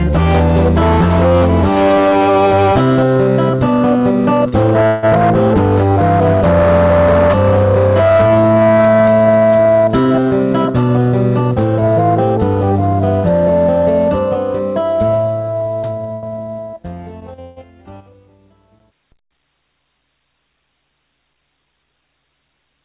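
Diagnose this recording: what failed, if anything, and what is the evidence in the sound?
Repeated stalls (stutter) at the network and jitter buffer stage, 4.46–5.05 s and 16.06–17.58 s: three hitches each, longest 155 ms, where the buffer ran dry and the receiver stretched the last sound.

Jitter buffer speed-up from 10.04 to 12.71 s: the sound runs about 5% fast at unchanged pitch as the receiver trims small pitch-period chunks, roughly 150 ms in total, to shed backlog.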